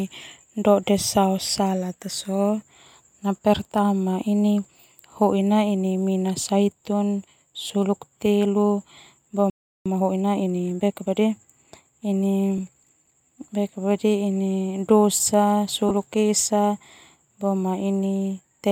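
A speech recording with three brief noisy smears where the sound briefly turns hissy. These come from lost LE Audio frames, which the LC3 decoder hides by repeating the last spectrum with random signs. The first, from 7.58 to 7.70 s, loses about 60 ms in short gaps of around 20 ms spread over 120 ms, which fits six 10 ms frames. The others fall at 12.58 s and from 15.89 to 15.91 s. At 9.50 s the speech stops dead for about 357 ms until 9.86 s. This is a playback stall, likely caused by the player running out of data. From 9.86 to 11.28 s the speech is hurried at 1.25 times speed, at normal pitch. This is time-compressed catch-up, with the player trimming and cross-fading small slices to clear its backlog.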